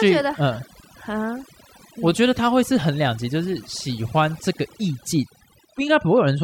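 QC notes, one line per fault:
Throughout, overdone noise removal: a noise reduction stage was pushed too hard on a noisy recording, so any frequency band sitting near its noise estimate gets cut deeply or switched off, and the softer parts of the speech are lost along with the noise. Between phrases the floor drops to near silence, dotted with twinkling, chirpy specks. A spectrogram shows a blank background scattered with isolated bright dots, and the edges of the speech look ragged.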